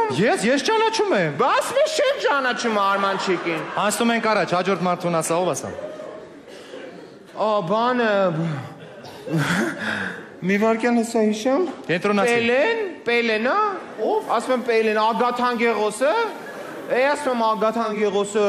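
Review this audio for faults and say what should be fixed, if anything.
At 13.86 s the digital radio blends to analogue. It crossfades over about 0.42 s to the station's FM broadcast. It stays on FM until 18.11 s, then blends back. Hiss rises to roughly 35 dB below the signal. The level does not change.

To prevent this, improve the antenna or reception so the digital signal holds, or record from a digital-only stream.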